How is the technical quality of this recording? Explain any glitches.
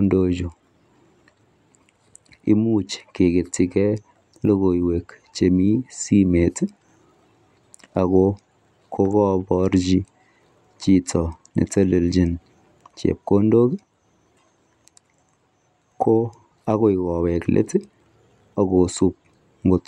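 The recording has no technical glitches: the signal is continuous and intact throughout, with nothing in it that points to a fault in capture, processing or playback.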